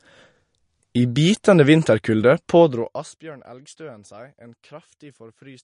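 From start to end, the speech carries plainly audible MP3 compression damage, likely from encoding that fits a bitrate near 43 kbps. Weak frequency lines drop in and out frame to frame, sounding watery and swirly with smeared attacks. A spectrogram shows nothing above 10.6 kHz and flickering gaps below.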